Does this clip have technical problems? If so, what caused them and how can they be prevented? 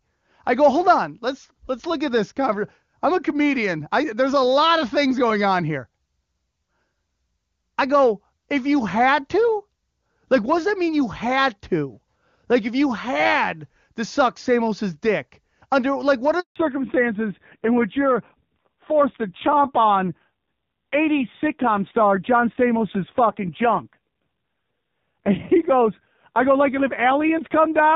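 Yes. A handover gap runs from 16.40 to 16.56 s: while the call switched networks, no speech frames arrived, so the sound fades out within a few tens of milliseconds and stays silent for 160 ms. The waveform shows a flat stretch and the spectrogram a blank vertical band. Keeping the device in one strong-coverage cell, or using networks with seamless handover, avoids this.

A fallback to narrowband follows from 16.56 s to the end. The clear HD Voice wideband coding heard earlier gives way to an older narrowband codec, and nothing above 4 kHz remains. The speech turns dull and raspy, which fits a low narrowband bitrate. On a spectrogram the energy is abruptly cut off at a hard 4 kHz ceiling. Ensuring both ends and the new network support wideband coding prevents it.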